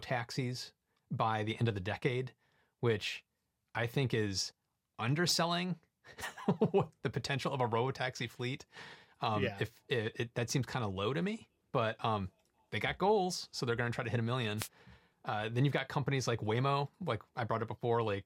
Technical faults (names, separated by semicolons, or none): DAB burbling; wireless microphone noise hit